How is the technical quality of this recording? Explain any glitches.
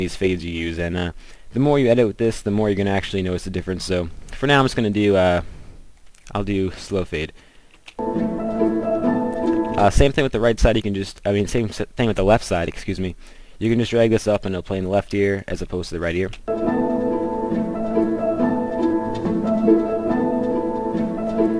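No audible glitches or faults.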